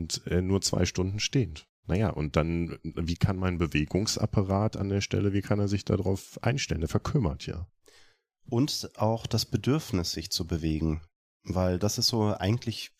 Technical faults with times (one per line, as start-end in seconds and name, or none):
none